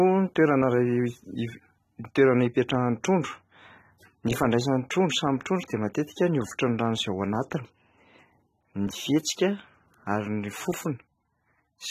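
A speech recording that has likely been through low-bitrate AAC compression, with damage consistent with AAC-LC at around 24 kbps across the whole clip. Nothing survives above 13.9 kHz, so the sound is dull and smeared, with warbling, fizzy artefacts plainly audible on sibilants and sustained sounds.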